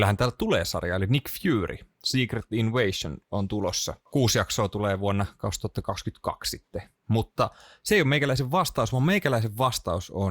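No technical faults can be heard anywhere in the speech recording.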